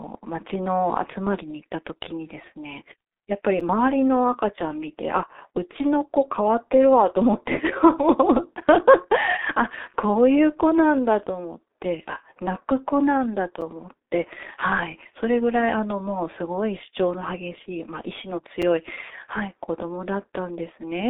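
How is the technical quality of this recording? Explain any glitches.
The technical quality is poor: the speech is heavily degraded by a low-rate telephony codec throughout, and four brief dropouts break it at regular points.

The G.723.1 codec damage runs the whole length. Its dull, narrow sound, confined to roughly 300 Hz to 3.7 kHz with nothing above 3.8 kHz, suggests a telephone-band coder running at around 6 kbit/s. Working in 30 ms frames with a slowly updated voice model, it smears fast changes, so consonants blur and the voice turns hoarse and muffled. A simple low-pass filter would dull the top end without this rough, hoarse texture.

The gap between chunks occurs at 3.6, 8.61, 13.61 and 18.62 s. Each is a hole of about 6.5 ms. They recur exactly every 5.0 s, which points to audio handled in 5-second chunks with a sliver of silence left at each join. No sound is lost, only interrupted. 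The strict spacing and clean silence set these apart from packet loss, which strikes irregularly and usually removes or smears sound.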